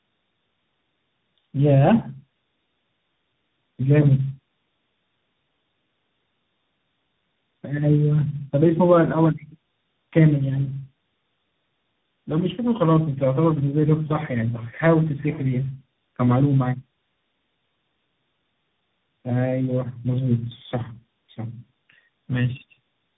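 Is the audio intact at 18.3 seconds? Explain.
No. Tandem speech coding is present at 18.3 seconds, and it runs through the whole clip rather than starting there. The speech sounds as though it passed through three speech codecs in a row, likely low-rate AMR-NB twice and then CVSD, each one recoding the already damaged output of the last. The losses pile up, so the speech is rough, muffled and warbly, and nothing remains above about 3.8 kHz.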